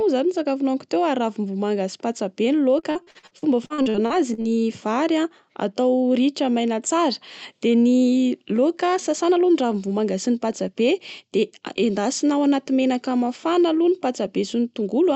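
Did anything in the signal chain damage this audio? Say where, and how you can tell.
Yes, the network stage. From 2.79 to 4.48 s there's repeated packet loss (robotic sound): choppy stretches where holes up to 41 ms get patched by extending the previous sound.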